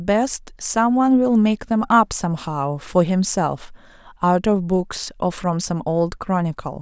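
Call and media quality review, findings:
No audible faults found in the speech recording; no defect to report against any component.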